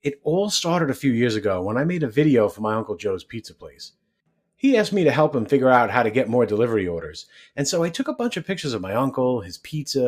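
From the start, a noise suppressor built for speech is working on this material, so the result is a noise suppressor applied to music or sounds. It treats sustained and decaying content as if it were background noise and pulls it down, while onsets pass mostly intact. The gain keeps moving by roughly 5 dB, so the level pumps and flutters, and held sound and tails come across thinner than the attacks around them.

Between 3.25 and 3.8 s there is sound cut by the noise suppressor. Here it decides a stretch of the signal is noise and attenuates it harder than its surroundings, reaching a drop of about 12 dB at the deepest point. Across a little under half a second of that window the sound sinks in level.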